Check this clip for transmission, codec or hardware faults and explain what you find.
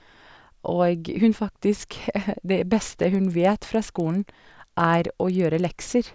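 One fault is present. From 3.15 s to 5.7 s the speech carries a steady ticking at 20 per second that sits under the signal and falls away in the pauses. This is a resampler restarted on every block: the audio was converted in separate 50 ms pieces, so each edge was filtered against missing or wrong neighbouring samples. The sound fits a downward conversion to 16 kHz, with a small error at every boundary.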